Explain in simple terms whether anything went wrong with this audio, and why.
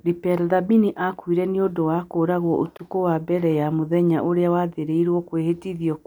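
At about 2.77 s, right after "nĩ ũndũ wa kũũragwo", the speech drops out completely for about 21 milliseconds, until 2.80 s, then comes back on "wa mbere ya mũthenya". It sounds like a short hole in the speech. This is a block of digital silence. The playback program likely didn't hand over the next chunk of sound in time, so that chunk was left empty. Its length fits a 1024-sample buffer. The sound switches off and back on with no fade.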